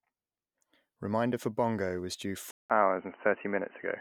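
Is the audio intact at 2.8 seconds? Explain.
No. After "for bongo was due", a gap of about 0.19 s at 2.51 s is followed by sound that stays dull, with nothing above 3 kHz, until the end. This is likely an input switched to a poorer device. Unlike a simple filter, the level and background noise change too.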